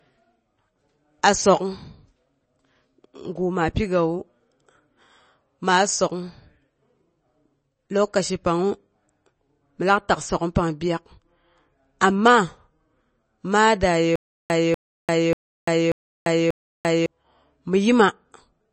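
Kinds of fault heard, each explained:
MP3 compression: Nothing is heard above about 8.3 kHz across the whole clip. The speech sounds watery and swirly, with chirpy s sounds and softened consonant attacks. This damage is plainly audible and is likely from MP3 encoding at a low bitrate, fitting about 32 kbps.
Stutter with silent gaps: From 14.16 to 17.06 s, a 243 ms burst of speech repeats five times. Each repeat is followed by about 344 ms of dead silence, so the cycle returns every 587 ms. This is likely a stalled player retrying its last fragment, and the speech that should have played in that span is lost.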